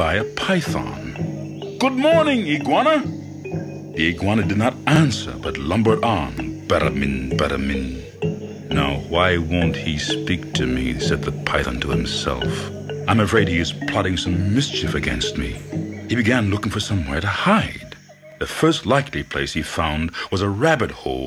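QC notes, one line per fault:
6.38 s, electrical switching spike: a single sharp snap sits on top of the audio, with a peak around -20 dBFS and no build-up or decay before or after it. It has the very fast leading edge of an electrical transient, not of anything in the acoustic sound itself. That points to a short arc that was likely induced into the audio line by a nearby switch, motor or static discharge.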